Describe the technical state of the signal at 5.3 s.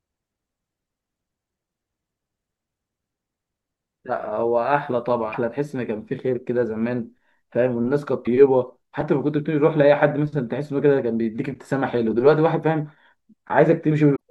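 At 5.29 to 5.35 s, damaged data in the compressed speech stream makes the decoder lose frame sync, giving a brief disturbance.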